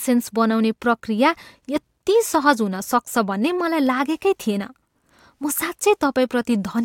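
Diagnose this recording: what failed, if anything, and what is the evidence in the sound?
Listening closely to the speech, nothing stood out as a fault at any stage of the chain.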